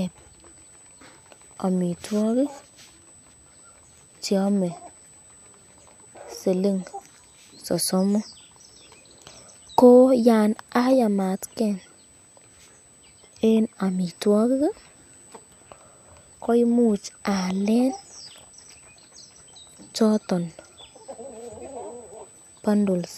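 Throughout the speech runs USB whine, a steady 8 kHz tone from the bus's 125-microsecond microframes, roughly 30 dB down, drawn as one unbroken horizontal spectrogram line.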